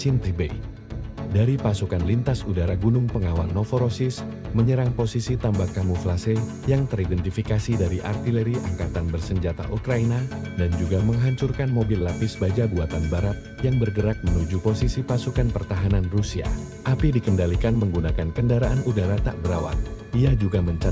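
Nothing goes wrong anywhere in the clip, so there's no technical fault to point out.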